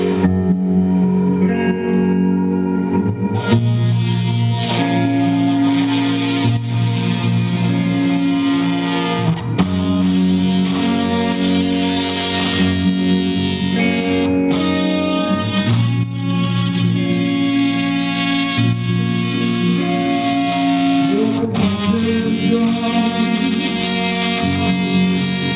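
From the first second to the end, the audio carries aliasing. The sample rate was dropped without an anti-alias filter, and the band stops hard at 4 kHz, which points to a conversion from 48 kHz down to 8 kHz. Everything that sat above 4 kHz has folded back down into the band at unrelated pitches, roughly 20 dB under the wanted signal, so the high end sounds gritty and metallic and the spectrum runs right up to that edge.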